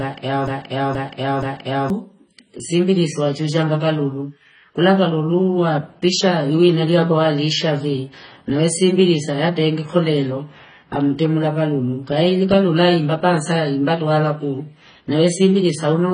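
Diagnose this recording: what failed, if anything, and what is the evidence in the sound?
A broken-record loop runs from 0.00 s to 1.90 s. The speech opens already caught in it, with the same 0.48 s fragment repeating exactly, back to back, three more times before normal audio resumes. The stage is playback or streaming, likely a stall in which the player or stream kept resending the last fragment it held. Whatever speech belonged in those first two seconds is gone and cannot be recovered from this recording.

AAC compression damage is heavy and runs through the whole clip. Nothing sounds above about 9.5 kHz, so the speech is dull, and consonants and sibilants take on a smeared, fizzy, warbling texture. The stage is the codec, likely AAC-LC at a very low bitrate, and the sound fits something around 16 kbps. The encoder has too few bits to spend, so it lowers its cut-off and coarsely quantises the remaining frequency lines.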